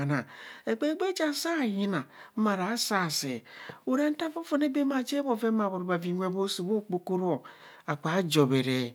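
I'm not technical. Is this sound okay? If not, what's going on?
Yes, the speech recording has no audible technical faults.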